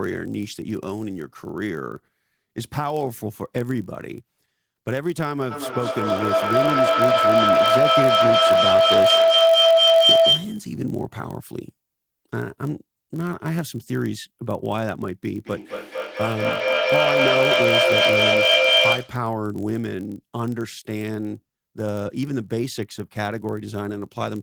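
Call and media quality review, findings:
Steady low buzz at 46.9 Hz through the whole clip, sound otherwise at normal pitch and speed (0.999x). Block size mismatch (padded): a stage writes short blocks into a larger read block, zero-filling the remainder. The rate fits a 1024-sample read block.

Rising tonal howl near 700 Hz, 5.51 to 10.69 s, pulsing roughly every 0.2 s, peaking about 10 dB above speech. Feedback howl: two devices in one room on the same call, with gain above unity around the mic-to-speaker loop.

Speech repeating at roughly 0.2 s intervals, 15.36 to 19.29 s, repeats stacking up rather than decaying, reaching about 8 dB above speech. Feedback echo between two devices: one device replays the other's mic feed, which is recaptured, outside either echo canceller's reference.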